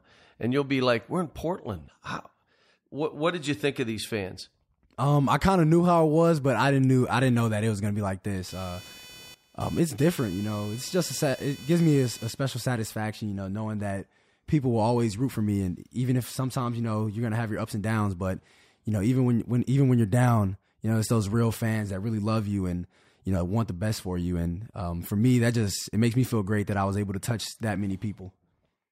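A chirping buzz near 500 Hz, about 20 dB below the speech, from 8.48 to 12.91 s: computer activity noise, load changes jolting shared ground.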